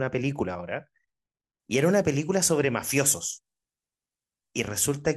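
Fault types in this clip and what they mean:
Pre-emphasis left on: From 1.6 s to the end, the speech turns thin, bright and hissy. The treble boost applied before transmission, matching a 75 µs FM curve, was never undone on playback. The 10 kHz region sits about 13 dB above 1 kHz.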